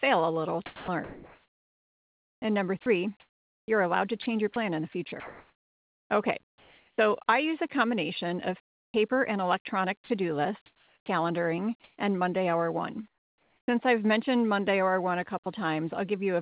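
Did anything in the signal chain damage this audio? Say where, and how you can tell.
Yes, at the call-processing stage. Sound chopped by the voice detector appears from 0.66 to 6.98 s, after "a little" and before "I use a combination", and again from 10.04 to 11.98 s. Quiet stretches totalling about 3.6 s and 0.62 s are swapped for synthetic fill, likely from the sender's voice detector gating transmission on and off.

Comfort noise in place of the background occurs from 8.64 to 8.94 s and from 13.08 to 13.68 s, ending before "I've mentioned". The real room tone becomes flat, featureless noise, about 36 dB and then about 8 dB quieter, likely generated at the receiver during discontinuous transmission.

Onset clipped by the voice detector shows from 8.90 to 8.94 s, after "use a combination of" and before "and electronic", and from 13.65 to 13.68 s. Speech begins abruptly, missing 40 ms and 30 ms of its start, likely because the detector reacted late and comfort noise filled the gap.

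Sound dropped by the voice detector occurs from 15.44 to 15.46 s. A brief piece of speech, about 10 ms, gives way to steady noise before resuming, likely because the detector treated it as background. The band-limited mu-law call path, with nothing above 4 kHz, is expected.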